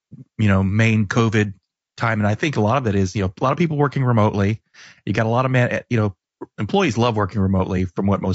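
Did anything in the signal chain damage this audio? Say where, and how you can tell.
Yes, at the codec stage, and it runs the whole clip rather than hitting at any one moment. The speech has a rough, grainy texture, with a hiss filling the gaps between the voice's harmonics and a top end that sounds thin and synthetic. That's likely low-delay AAC compression, something like AAC-ELD at around 32 kbps. At that rate it can't spend enough bits on the roughly 500 frequency lines in each frame, so quantization noise leaks in between the harmonics.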